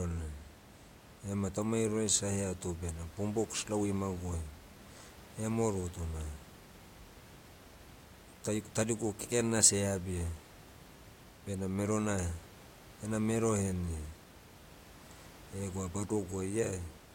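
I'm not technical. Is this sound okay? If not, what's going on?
Yes, there is nothing wrong with this recording, and the faint background noise is just the normal sound of the room the microphone was in.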